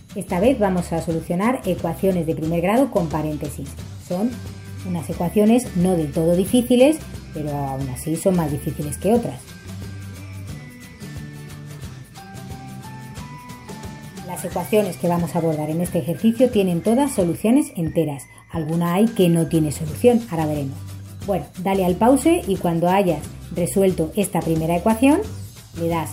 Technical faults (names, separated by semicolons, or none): none